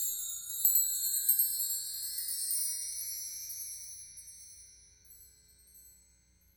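From start to finish, every sound arrives twice: a second copy of the whole audio follows about a tenth of a second behind, at roughly the same loudness as the first. It has no decay and no room colour, so it doesn't read as an echo. It's a clean slapback doubling. This is a doubled audio track, likely caused by the signal being captured again through a slower path and mixed back in.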